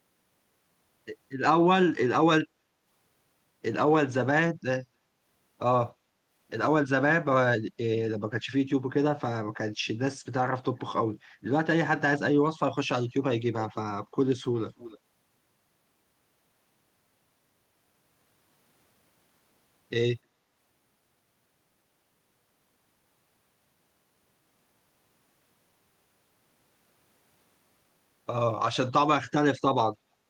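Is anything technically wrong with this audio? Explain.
Yes, there are two problems.

From 2.48 to 2.84 s the room background gets gated by the echo canceller. While the far-end loudspeaker was playing, the canceller clamped the mic, so the background dips by about 6 dB for under half a second, then comes back.

From 13.59 to 13.78 s and from 14.77 to 14.99 s there's a faint delayed copy of the speech, trailing by about 293 ms and sitting roughly 20 dB down. That's likely an echo leak: loudspeaker sound the canceller didn't fully remove got sent back.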